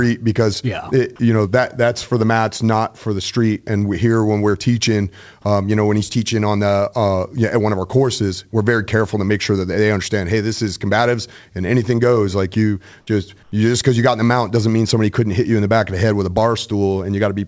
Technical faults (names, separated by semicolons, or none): comfort noise in place of the background